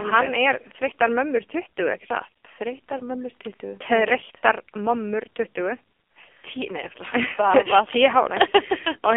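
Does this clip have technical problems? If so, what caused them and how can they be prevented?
Yes. Throughout, the speech sounds boxy and thin, with nothing below about 250 Hz or above 3.4 kHz, and the voice has a heavy buzzy, synthetic quality. This is the AMR narrowband mobile codec: AMR-NB samples at 8 kHz and rebuilds the voice from a vocal-tract model driven by sparse pulses, and the strong damage fits its 5.9 kbps mode. It can be prevented by carrying the call over a wideband or higher-bitrate codec.

Between 2.98 and 3.03 s there is a brief dip or warble in the speech, which fits a single lost 20 ms frame. These are lost AMR speech frames. A radio error corrupted the frame, so the decoder filled the gap by repeating the last good pitch and vocal-tract settings at reduced gain. The voice then comes back weak or rough for a moment. A stronger radio link or better error protection would prevent it.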